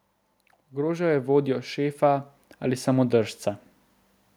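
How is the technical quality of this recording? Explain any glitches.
The recording has one fault. From 0.71 to 3.44 s the automatic gain is rising: sensing a quiet input, the gain control lifts its level by about 8 dB, so speech and background noise swell together, unlike a speaker moving closer, where only the voice grows.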